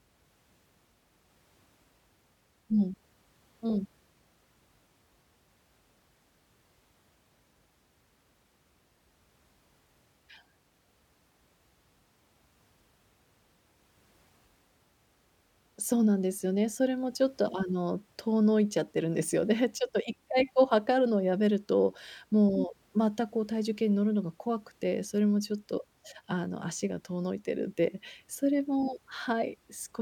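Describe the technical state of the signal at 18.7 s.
At 18.7 s the speech signal is intact, with no dropout, distortion, glitch or other fault audible at that moment.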